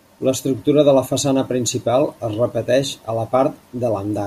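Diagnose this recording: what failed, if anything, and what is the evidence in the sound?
Nothing stood out on listening to this speech recording that would point to a failure at any stage of the chain.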